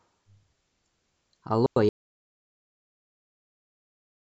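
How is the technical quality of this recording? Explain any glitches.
The recording has two clear faults, and the second takes out the whole last part of the speech.

At 1.66 s there is a digital wireless dropout lasting 105 ms, to 1.76 s. The wireless receiver lost too much data and muted itself. It faded out very quickly. You hear a clean hole of near silence, with no noise burst around it.

From 1.89 s to the end there is an audio dropout to silence. The sound cuts off mid-flow and never returns. The gap is total silence, with no room tone. The input was likely lost, while the recorder kept writing silence.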